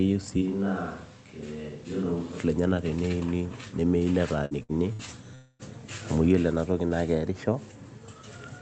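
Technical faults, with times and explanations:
0.43 to 2.37 s, switch to a distant microphone: The sound turns roomy and hollow, drops about 5 dB, and room noise rises to about 25 dB below. A farther microphone likely took over.
4.45 to 4.54 s, 4.63 to 4.72 s and 4.93 to 5.02 s, burst of packet loss: Each time about 60 ms went missing. The receiver stretched the last sound into a fading buzz or hiss, then jumped ahead.
5.35 to 5.62 s, long network dropout: About 240 ms of audio is lost. A fading continuation fills roughly 0.24 s, then brief silence before the sound resumes further on, likely from a network stall.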